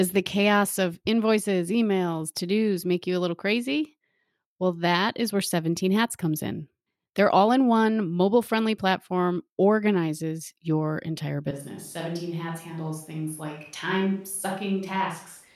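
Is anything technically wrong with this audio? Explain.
Yes, there's one problem. From about 11.51 s, right after "platform organizes your entire", the speech suddenly turns roomy and hollow, loses bass, drops roughly 5 dB, and picks up background noise sitting around 35 dB under the speech. It stays that way to the end. That's the signature of a switch to a distant microphone. Most likely the close mic dropped out and a farther one, like a camera mic, took over, hearing more room than mouth.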